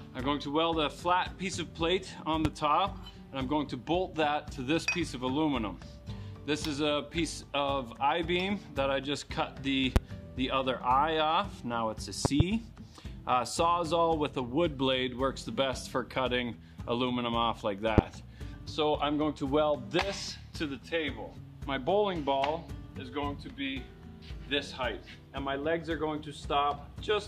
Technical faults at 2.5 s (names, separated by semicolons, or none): loud pop